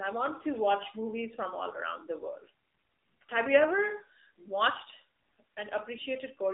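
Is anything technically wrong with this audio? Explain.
Yes. Throughout, it's been through the AMR narrowband mobile codec. Everything sits between roughly 300 Hz and 3.7 kHz, and the low-bitrate vocal-tract model makes the speech plainly buzzy and synthetic, which fits a low mode around 7.4 kbps.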